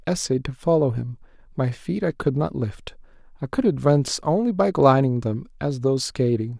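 Speech recording, with no technical faults to report. Nothing in it calls for a time or a cause.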